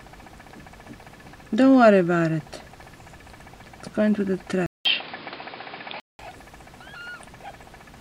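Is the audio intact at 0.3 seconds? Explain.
Yes, at 0.3 seconds the audio is intact, with no dropout, click, distortion or other fault audible at that moment.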